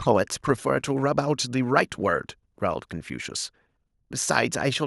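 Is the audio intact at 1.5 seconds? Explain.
Yes, the speech at 1.5 seconds plays through intact, with no dropout, click or distortion at that moment.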